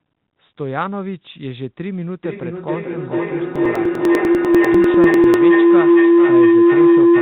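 From 2.23 s to the end, a tone near 300 Hz swells to about 14 dB above the speech, with the loop repeating roughly every 0.4 s. This is feedback howl: a microphone-to-loudspeaker loop gaining level on each trip. From 3.56 s to 5.34 s, regular ticks recur every 0.099 s, around twenty in all. These are periodic USB or driver dropouts, where a blocked bus skips about a millisecond of audio each time.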